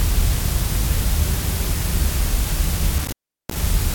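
A loose connection opens intermittently between 2.98 and 3.62 s, an intermittent contact dropping the sound for about 0.37 s, with crackle at the edges and faint hiss underneath.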